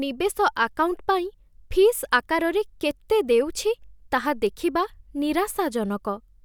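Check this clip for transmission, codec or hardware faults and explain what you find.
Three bit error spikes occur, where a single flipped bit on a digital link or in memory throws one or two samples off by a power of two. Each is a brief, broadband tick unrelated to the speech. They fall at 1.87 s (about -30 dBFS), at 2.91 s just before "ଦେଉଛି ତାହା ଦେଖିବା" (about -18 dBFS, the loudest), and at 4.47 s right after "ଦେଉଛି ତାହା" (about -24 dBFS).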